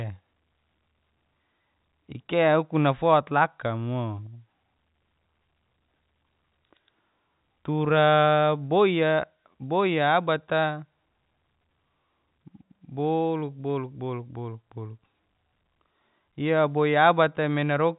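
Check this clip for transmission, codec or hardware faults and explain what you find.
Listening through the speech, which comes over the line as G.711 telephone audio with nothing above 3.8 kHz, nothing stood out.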